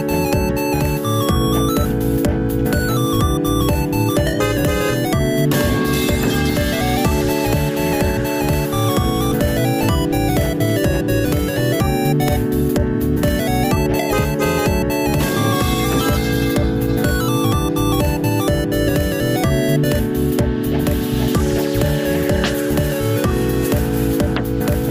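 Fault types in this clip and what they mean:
Skip ahead: At about 9.31 s, roughly a second of audio is dropped and playback jumps forward with no gap. On a waveform the two sides join abruptly at one point, and a spectrogram shows a sudden discontinuity in the pattern rather than any silence.
Jitter buffer speed-up: From 10.58 s to 24.29 s, the receiver trims tiny pitch-period pieces to reduce excess buffered delay. This runs the sound about 1% fast at unchanged pitch and removes about a tenth of a second in total. The waveform and spectrogram look slightly compressed in time, with no visible splices.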